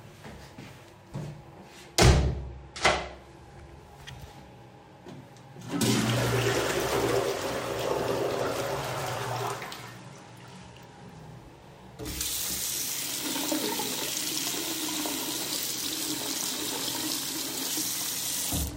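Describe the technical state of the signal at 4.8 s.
At 4.8 s the signal is intact, with no audible fault at that moment.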